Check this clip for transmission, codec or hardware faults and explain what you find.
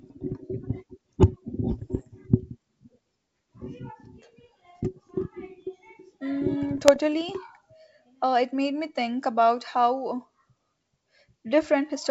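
Two bursts of bit errors on an ADPCM link break into the speech, which otherwise travels over G.722 wideband telephone coding at what sounds like 64 kbit/s. The first runs from 1.72 to 2.03 s, the second from 6.69 to 6.99 s. Flipped bits corrupt the coded samples. They also throw off the decoder's step size and predictor, so each error rings on briefly. The result is pops, rough crackle and quick jumps in level. The first burst is denser, fitting an error rate near half a percent. The second is lighter.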